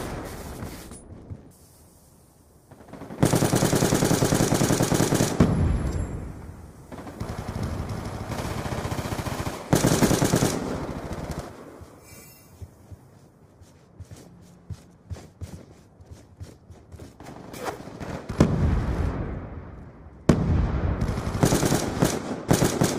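Nothing goes wrong anywhere in this audio, so there's no fault to point to at any moment.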